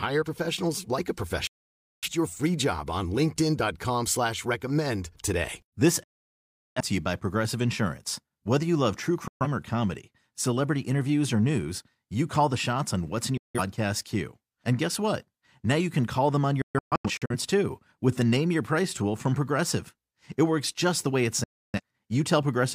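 Digital broadcast dropout at 1.47 to 2.10 s, 6.03 to 6.81 s, 9.28 to 9.46 s, 13.37 to 13.61 s after "shots on what's in", 16.62 to 17.36 s between "can call them on" and "too with the name", and 21.44 to 21.80 s after "just the way it". The receiver mutes whenever frames fail, fading out in about 3 ms, so the speech drops to silence and what was said there is lost. The 16.62 s event breaks into several short holes, the longest 128 ms.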